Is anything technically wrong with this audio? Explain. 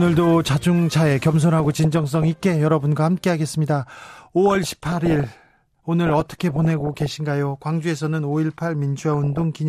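Yes, the speech carries DAB burbling in four bursts: 1.57 to 2.36 s, 4.46 to 5.24 s, 6.07 to 7.06 s, and 9.12 to 9.42 s. Weak reception let bit errors, roughly half to one percent, slip past error correction into the MP2 data, corrupting samples and scale factors across what sounds like dozens of frames. Individual sub-bands leap in level frame by frame, giving short noisy blips over the speech.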